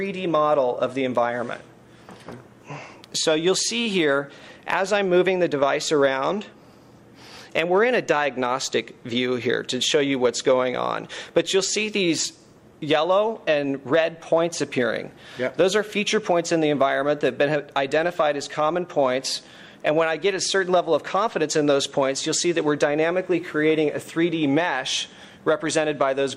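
No technical faults are audible.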